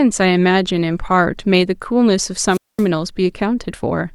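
At 2.48 s the radio link from an analogue FM wireless microphone weakens until the receiver's squelch circuit decides the carrier is too poor and mutes its output, a wireless microphone squelch dropout. In the speech you hear hiss and static swell briefly, then a hole of near silence lasting about 220 ms, before the signal recovers and the voice comes back, with the whole disturbance over by 2.87 s.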